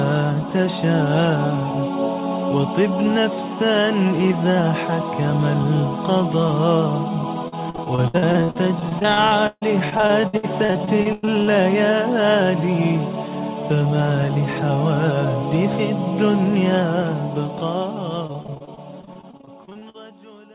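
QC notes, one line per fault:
7.48–11.49 s, repeated packet loss (robotic sound): a choppy stretch where roughly 30 short dropouts land one after another. Each hole gets papered over by stretching the last bit of sound, so about a quarter of this span is really filler. The longest hole is around 147 ms.
18.27–19.96 s, repeated packet loss (robotic sound): same choppy sound again. There are about twenty gaps, but they're shorter, none longer than 43 ms. Around a quarter of the span is concealed, all within the 4 kHz-limited band of the call.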